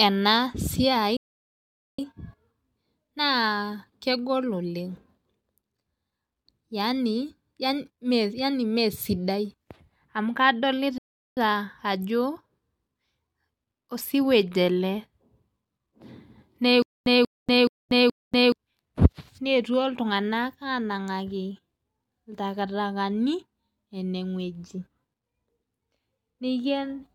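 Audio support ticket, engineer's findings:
Playback stall at 1.17 s to 1.99 s: speech cuts out mid-flow for about 0.82 s, then resumes. Likely the player buffer ran dry or its output thread was blocked, so nothing reached the device until it recovered.

Playback stall at 10.98 s to 11.37 s: second dropout, about 0.39 s of silence mid-speech. Same symptom, shorter. Likely a brief buffer underrun or thread block in the playback path.

Stutter with silent gaps from 16.82 s to 18.52 s: a 186 ms fragment of speech repeats four times, each followed by about 239 ms of digital silence, giving an even 425 ms cycle. Likely the stream stalled and each retry replayed the last fragment before running empty. The speech due in that span is lost.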